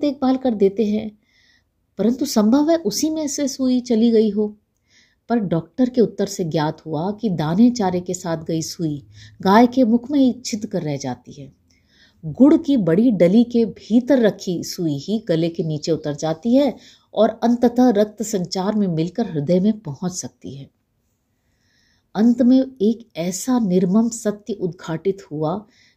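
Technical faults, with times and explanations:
No technical faults can be heard anywhere in the speech recording. Nothing in the audio stands out as a fault at any point.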